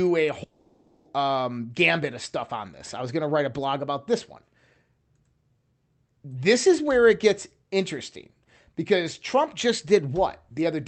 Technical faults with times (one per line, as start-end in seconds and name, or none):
0.43-1.07 long network dropout
2.87-2.89 chunks out of order